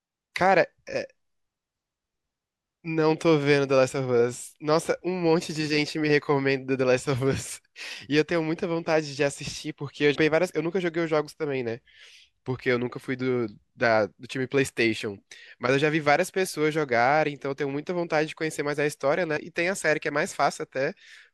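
At 10.14 s the speech jumps forward. Roughly a third of a second of audio is gone. This is compressed frames skipped. Whole frames never reached the output, either missing from the file or rejected by the decoder as damaged. The jump size fits a 24 ms codec frame. At 19.36 s it happens again, losing about a tenth of a second.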